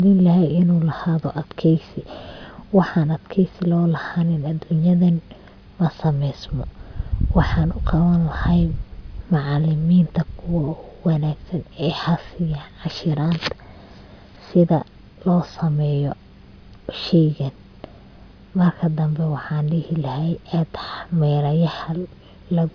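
No technical faults are audible.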